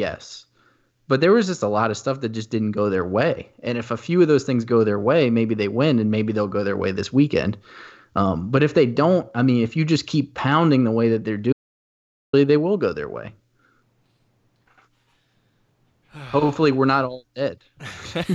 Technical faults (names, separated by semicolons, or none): audio dropout to silence